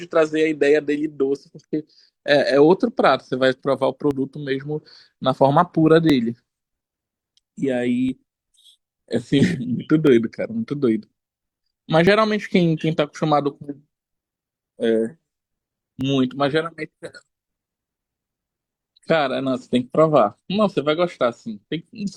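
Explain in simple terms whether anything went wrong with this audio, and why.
The speech has small clicks or skips at 4.11, 6.10, 8.09, 10.07, 12.07 and 16.01 seconds. This is overlap between stream segments. The audio arrives in 2-second pieces, and at some joins a sliver of about 23 to 37 milliseconds is cut away. Unlike a dropout, there's no silent gap. The sound simply jumps ahead, and the steady two-second spacing gives it away.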